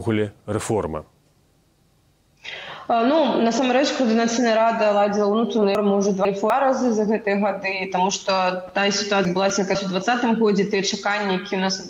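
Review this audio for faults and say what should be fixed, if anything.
Chunks out of order at 5.75–6.5 s and 9.25–9.75 s: a 250 ms chunk lands two slots late, then one slot late, giving jumbled, hard joins. Reorder chunks by sequence number in the jitter buffer before playback or writing.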